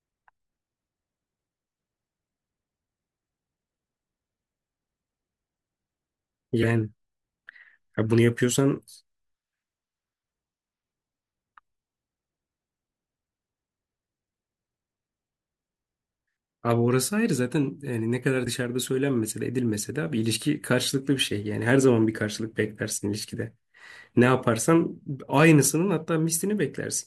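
At 6.61–6.64 s and again at 18.45–18.47 s the speech jumps ahead with a brief glitch, likely a broken MP3 bit reservoir: after lost frames, the next frame borrows bits that now belong to another frame. Its roughly 26–28 ms span, about one 24 ms frame long, sets it apart from a clean dropout or click.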